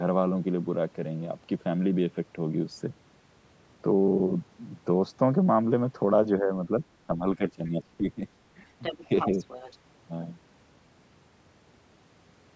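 A speech recording, band-limited by call microphone processing to nothing above 8 kHz, with speech suppressed in double talk at 6.41–6.5, 6.66–6.71, 7.07–8.24 and 8.98–9.12 s. These are dips of about 5 to 15 dB, seen as notches in the waveform envelope, likely from an echo canceller ducking both talkers at once. The other side's voice leaks through at 8.82–8.97 and 9.19–9.78 s, about 10 dB below the speech, likely uncancelled loudspeaker echo. On a spectrogram it shows as faint, separate harmonic traces.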